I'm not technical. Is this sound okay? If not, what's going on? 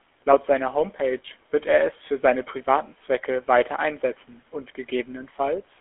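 No. Throughout, the speech passes through a GSM full-rate codec, the old mobile-phone coding. It rebuilds the voice from sparse pulses, adding a buzzy roughness and cutting everything above 3.4 kHz.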